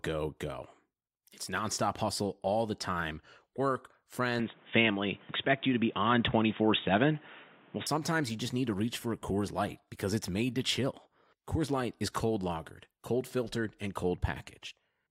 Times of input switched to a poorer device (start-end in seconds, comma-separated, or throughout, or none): 4.39-7.87